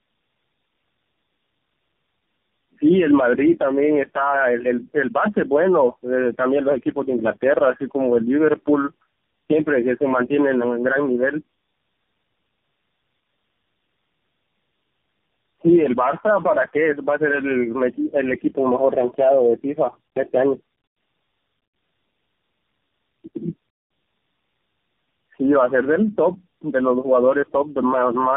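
Tandem speech coding runs through the whole of this speech recording. The call appears to have been decoded and re-encoded at each network border, so every coder worked on the previous one's degraded output. The result is a rough, muffled, warbly voice with nothing above 3.4 kHz. Its compounded smearing fits about four low-rate narrowband speech codecs in a row, AMR-NB among them, joined by plain telephone-grade links.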